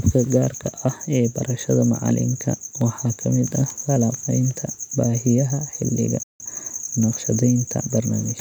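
At 6.23 s, right after "falanqaynta baahiyaha xilliga", the speech just stops dead for about 170 ms, out to 6.40 s. That's a playback stall: the output goes silent mid-flow and then resumes. The cause is likely the player running dry of buffered data or having its audio thread held up for a moment, so nothing reached the output until it got going again.

Straight after that, from 6.40 s to 7.06 s, you get time-compressed catch-up. The player is clawing back the lag from the stall by snipping out little slices of audio and cross-fading over the joins, which runs things about 1.25 times faster. Pitch stays where it should, so the talker doesn't sound chipmunky, just hurried.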